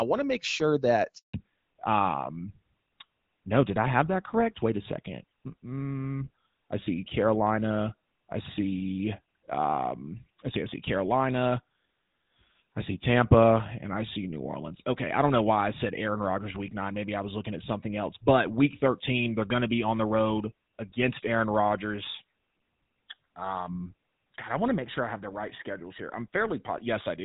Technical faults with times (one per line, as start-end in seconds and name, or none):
1.17-1.33 handover gap
1.33-27.24 fallback to narrowband